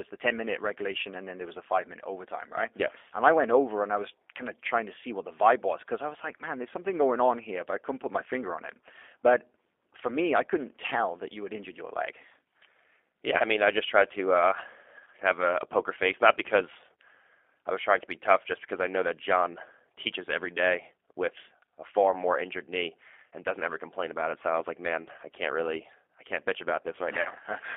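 Throughout, the speech passes through a G.729 codec that rebuilds each 10 ms frame from a vocal tract filter, a pitch predictor and a few pulses, which fits an 8 kbit/s G.729A link. Energy is confined to roughly 300 Hz to 3.5 kHz, and the speech sounds plainly rough and synthetic.

At 13.38 to 13.42 s and again at 15.05 to 15.08 s, VoIP packet loss concealed by the speech codec occurs. About 20 ms of audio is missing each time, which fits one lost packet. The decoder extends its last pitch and filter at falling gain, so a brief smear replaces the sound and leaves it weakened just afterward. At 27.21 to 27.30 s, 40 ms goes missing, consistent with two consecutive packets, and the concealed sound fades before the speech recovers.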